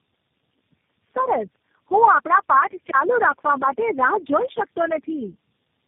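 Tandem speech coding runs throughout: the sound points to four low-rate speech codecs in a row, each recoding the last one's damage, leaving rough, warbly speech with nothing above 3.6 kHz.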